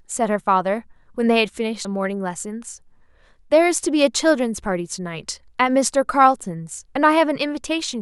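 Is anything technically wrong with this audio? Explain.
Yes. The speech has damaged data in a compressed stream at 1.84 s and again from 6.83 to 6.85 s. Corrupted bytes make the decoder misread those frames and lose sync until it finds the next frame header, so each spot comes out as a brief chirp or blip.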